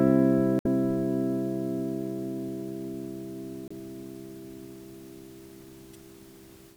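A short recording of sounds with three brief glitches from damaged data in a compressed stream, at 0.59–0.66 s, 3.68–3.72 s and 5.93–5.96 s. Corrupted bytes make the decoder misread frames and lose sync, so each spot comes out as a brief glitch.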